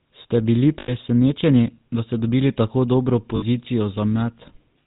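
From start to finish the speech carries the GSM full-rate codec's buzzy, gravelly texture, and it's plainly audible. Nothing comes through above 4 kHz, and the pulse-driven vocal-tract model leaves that rough grain, which fits the 13 kbps full-rate coder.

At 0.8 s there's a spell of lost GSM frames lasting 80 ms, to 0.92 s, where the decoder keeps repeating the last good frame and the sound hangs as a rough, metallic ring. Right after "ste dobili tako dobro" it happens again, at 3.36 s for 60 ms. The lengths point to about four and three 20 ms frames respectively.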